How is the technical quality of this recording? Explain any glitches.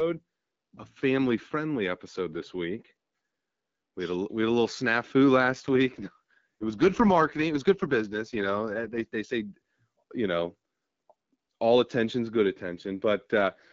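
The recording has one recurring fault, an AMR rate drop, heard twice against the light coding of an AMR wideband (HD Voice) call.

From 5.38 to 9.07 s, after "had a little snafu" and before "they say", and again from 13.38 s to the end, the speech turns rough and synthetic. This fits the network pushing the codec from 12.65 down to 6.6 kbit/s to free bits for error protection. A spectrogram keeps the same upper band edge and the waveform shows no gap, but the harmonics blur into grainy, poorly defined texture until the rate recovers.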